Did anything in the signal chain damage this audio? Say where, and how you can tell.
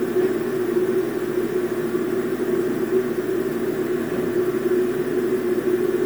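Yes. The damage sits at the codec stage and runs through the whole clip of sounds: generation loss. The texture is swirly and hollow, with smeared transients and blurred attacks, more than a single 128 kbit/s MP3 pass would cause. That compounding points to the audio likely having been decoded and re-encoded about four times. Each pass quantises on a shifted frame grid, so noise and spectral holes accumulate. Single-pass low-bitrate coding gives steady artefacts instead of this layered smearing.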